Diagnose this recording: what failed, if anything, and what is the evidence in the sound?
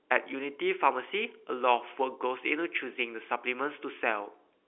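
Nothing failed in this recording.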